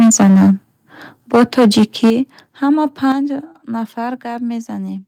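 A speech clip. From 0.0 to 0.51 s and 1.34 to 2.1 s the loudest syllables crackle harshly, likely microphone overload, with peaks driven about 7 dB past the converter's limit and flattened. At 2.1 s the level drops by about 9 dB, then at 3.12 s by about 6 dB more, likely the microphone volume stepped down by the call software.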